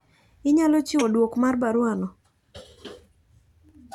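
A speech clip with one audible jump: between 1.00 and 1.02 s, just before "duok mar baruwa no", the sound jumps forward, losing about 50 ms. This is compressed frames skipped. A couple of whole frames never reached playback, either missing or rejected by the decoder as damaged, and the jump size points to frames of 23.2 ms.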